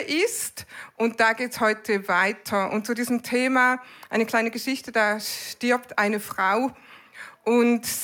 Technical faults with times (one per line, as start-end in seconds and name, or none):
none